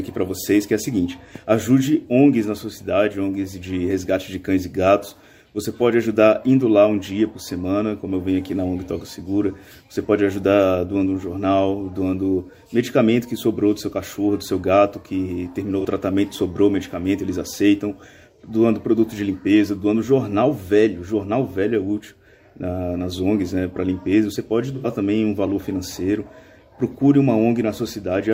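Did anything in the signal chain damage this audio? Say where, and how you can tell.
Yes. AAC frame loss with concealment at 15.79 to 15.85 s and 24.75 to 24.87 s, a codec and network stage fault. The first gap lasts about 43 ms, which fits a single lost frame; the second runs about 85 ms, consistent with two consecutive frames. In each, the decoder rebuilt the missing stretch from the last good spectrum, so the sound turns briefly smeared and noisy instead of dropping out.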